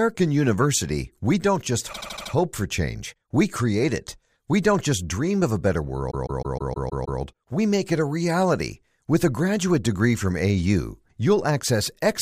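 From 1.92 to 2.31 s, repeated frames make the speech stutter. A 78.4 ms block, about three compressed frames, plays five extra times, adding 0.39 s. At 6.10 to 7.20 s, a 156.7 ms block repeats seven more times, adding 1.1 s.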